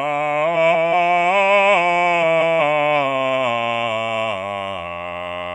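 From 0.55 to 0.94 s and again from 2.22 to 2.57 s, the music breaks into a garbled flutter. These are frames out of order: two adjacent blocks of roughly 186 ms each were decoded in swapped sequence, which fits runs of four frames. Nothing is lost. On a spectrogram, the harmonic lines jump abruptly at the midpoint and resume at the end. The waveform shows matching discontinuities at all three joins.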